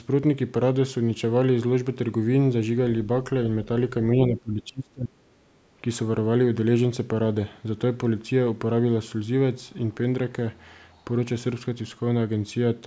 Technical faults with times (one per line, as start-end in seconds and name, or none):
4.16-5.14 speech suppressed in double talk
5.42-5.70 background gated by the echo canceller